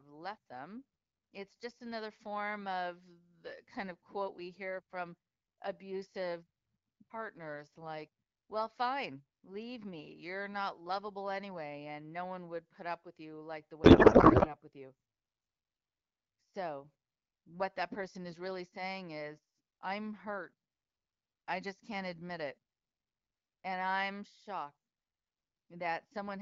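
Right after "with you like the", at 13.83 s, the speech collapses into a garbled, warbly noise that barely tracks what was being said, and it holds until 14.55 s, just before "with you" comes through clean. That's a codec payload misread: the receiver is unpacking the AMR frames with the wrong bit layout, so the fields land in the wrong places. It sounds like octet-aligned packets being read as bandwidth-efficient. The surrounding AMR-WB audio sounds like about 12.65 kbit/s.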